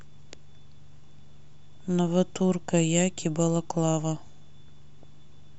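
Right at the tail, around 5.03 s, there's a quick blip of DAB burbling in the speech. Weak reception let bit errors slip past the error correction and into the MP2 stream, so a few sub-bands got wrong sample values and short blips of noise. You hear it as a tiny noisy blip laid over the sound, which fits a handful of damaged frames and a bit error rate of around 0.2 percent.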